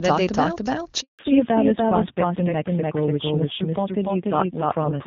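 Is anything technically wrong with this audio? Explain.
Yes, there are three faults. A doubled audio track runs throughout: a second full-band copy trails roughly 300 ms behind at about equal level, with no decay, likely from a slower capture path or misaligned edit.

A handover gap occurs from 1.01 to 1.19 s. The speech cuts out for 180 ms as the call switches networks, and whatever was said there is lost.

A fallback to narrowband follows from 1.19 s to the end. Before the switch, wideband speech is clear. Afterwards, nothing above 4 kHz remains, and the duller, rougher sound points to a low-rate narrowband codec around 5.9 kbit/s.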